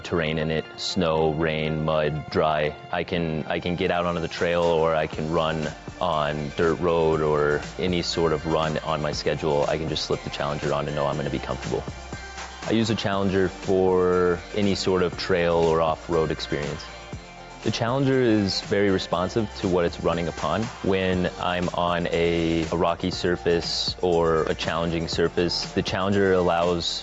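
Gain pumping runs through the whole clip, likely from microphone gain set far too high with a fast limiter clamping down on each loud moment. The gain swings by around 5 dB under louder sound, squashing the dynamics, all within the call processing's band topping out near 8 kHz.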